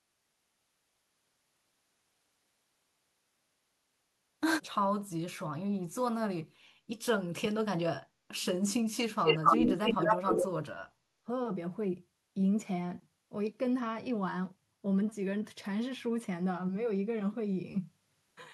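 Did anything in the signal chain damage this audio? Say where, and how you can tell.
Yes, in the call-processing stage. The speech is pulled down in three places: 7.36 to 8.46 s, 8.97 to 11.03 s, and briefly 11.19 to 11.28 s. The first two drop by around 40 dB and the last by about 25 dB. This is speech suppressed in double talk, likely from an echo canceller that could not separate the near talker from loudspeaker echo and turned everything down. On a waveform these show as sudden narrowed stretches. A spectrogram shows faded bands.

An echo leak, also in call processing, overlaps the second suppressed stretch from 9.24 to 10.44 s. A delayed copy of the speech arrives 246 ms, about a quarter second, behind the original, at a level within roughly 5 dB of it. The loudspeaker's pickup likely got past cancellation and was sent back. A spectrogram shows the harmonic pattern repeated as a ghost, shifted right by that same quarter-second offset.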